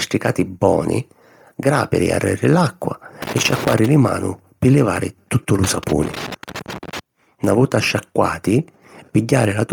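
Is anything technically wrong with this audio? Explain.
Yes. The speech carries a breathy, grainy edge from start to finish, most likely from heavy Bluetooth LC3 compression, which fits a low bitrate near 32 kbps. Zeroed upper bands are refilled with noise, so the spectrogram shows smeared, speckled highs stopping near 20.2 kHz.

Loose connector crackle appears at 3.22–3.86 s, right after "boni gràpiri arreri l’acqua", and again at 5.64–6.99 s, after "pi livari tuttu lu". A failing contact chops the signal into irregular scratchy bursts, seen as dense vertical spikes and dropouts in the waveform.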